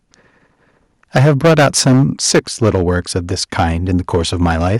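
From 1.15 to 3.17 s the louder syllables turn harsh and crackly, with their peaks flattened off. That's microphone overload, most likely an input level running about 12 dB too hot, so roughly a tenth of the samples slam into the converter's ceiling. Right at 1.18 s the voice and background drop suddenly by about 3 dB, which sounds like a microphone volume step-down, likely the call software reacting to that distortion by pulling the device gain in one go. It isn't enough, though. The crunch carries on, and from 3.58 to 4.76 s the overload returns more mildly, about 6 dB over, clipping only about 2% of the samples. It's likely the same hot input stage.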